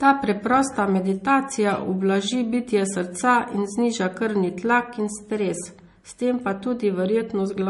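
From start to finish the speech sounds dull and smeared, with nothing above about 11.1 kHz and the swirly, watery edges of heavy MP3 coding. The likely cause is low-bitrate audio saved at a high bitrate. The cut-off and artefacts suggest an MP3 first encoded at around 40 kbit/s, then re-encoded at 320 kbit/s. The second pass preserved the damage but could not restore the missing top end or detail.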